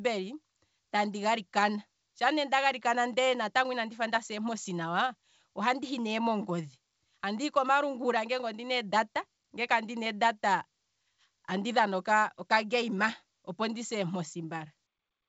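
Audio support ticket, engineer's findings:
Nothing stood out on listening to the speech, which comes across as expected over the G.722 wideband telephone path at 64 kbit/s.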